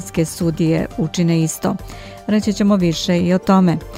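No technical faults are audible anywhere in the clip.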